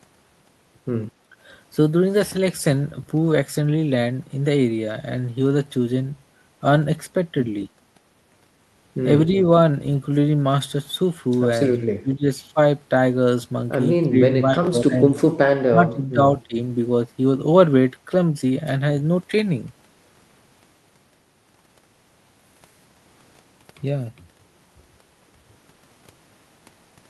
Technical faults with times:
12.01-12.25 speech suppressed in double talk
14.03-14.16 speech suppressed in double talk
14.43-15.05 speech suppressed in double talk
15.67-16.20 speech suppressed in double talk
16.47-16.59 speech suppressed in double talk

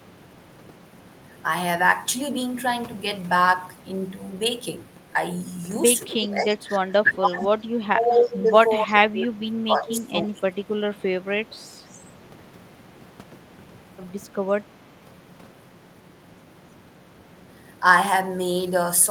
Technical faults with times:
6.08-10.66 speech suppressed in double talk
6.22-6.56 echo leak
7.41-7.46 echo leak
8.88-8.93 echo leak
9.89-10.01 echo leak
11.20-11.25 speech suppressed in double talk
11.87-11.94 echo leak

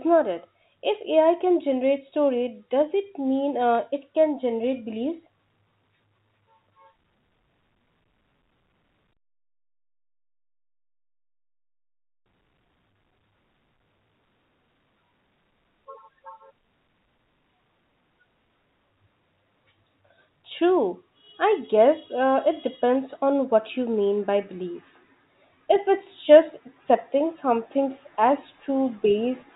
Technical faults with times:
none

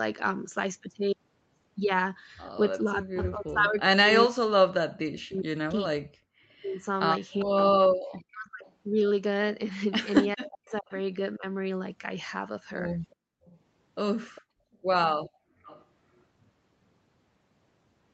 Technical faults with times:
2.82-8.66 speech suppressed in double talk
7.39-7.45 echo leak
8.67-8.72 echo leak
10.35-11.44 speech suppressed in double talk
10.68-10.79 echo leak
13.11-15.84 echo leak
13.15-13.44 background gated by the echo canceller
14.67-15.65 background gated by the echo canceller

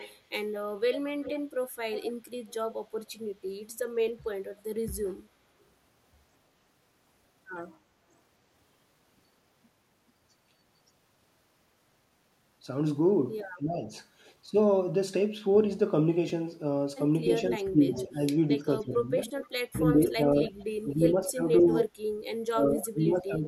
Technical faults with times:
0.00-2.54 echo leak
1.11-1.23 speech suppressed in double talk
13.58-13.90 speech suppressed in double talk
16.28-16.30 chunks out of order
17.33-18.05 echo leak
17.57-23.48 speech suppressed in double talk
19.40-20.63 echo leak
21.72-21.84 echo leak

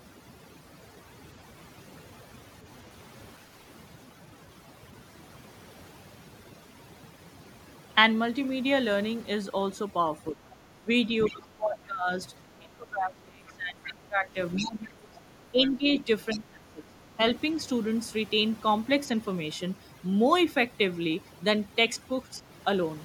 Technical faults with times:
0.00-23.04 overdone noise removal
10.31-10.45 speech suppressed in double talk
10.50-10.56 other side's voice leaking through
10.81-10.88 speech suppressed in double talk
11.25-11.29 other side's voice leaking through
11.28-12.10 speech suppressed in double talk
12.59-17.19 speech suppressed in double talk
14.56-14.64 other side's voice leaking through
16.30-16.39 other side's voice leaking through

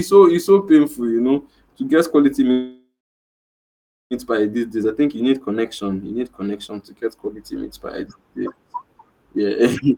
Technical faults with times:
2.51-4.14 call audio freeze
9.91-9.98 jitter buffer speed-up

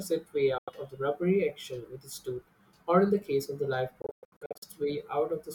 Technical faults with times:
0.58-0.70 Bluetooth dropout
4.02-4.64 Bluetooth dropout

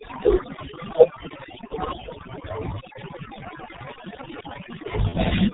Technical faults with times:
0.00-5.54 overdone noise removal
0.00-5.54 G.723.1 codec
1.67-1.74 VoIP packet loss concealed by the speech codec
5.09-5.18 VoIP packet loss concealed by the speech codec

